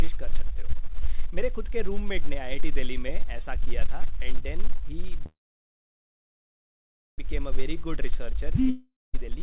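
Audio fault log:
5.26–7.20 s, call audio freeze: The last sound carries on briefly as a fading buzz, then the audio falls silent for about 1.8 s before resuming exactly where it stopped, so nothing is lost but the rest of the clip arrives roughly 1.9 s late. This is likely packets stalling in transit while the jitter buffer runs dry, with the receiver stretching the final sound to cover the wait. The band-limited, narrowband texture, with nothing above 4 kHz, fits a G.711 mu-law call path.
8.70–9.15 s, long network dropout: The sound trails off into a decaying hiss, settles into about 0.2 s of silence, and then picks up further along, so that roughly 0.44 s of audio never plays. This is likely a run of packets that never arrived. The receiver covered the hole for about 0.44 s by extending and fading the last sound, and when new packets came in, playback skipped ahead past the missing stretch rather than filling it back in.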